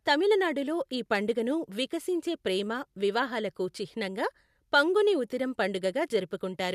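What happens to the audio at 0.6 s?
Nothing goes wrong at 0.6 s; the speech runs on intact through that moment, with no dropout, click or distortion.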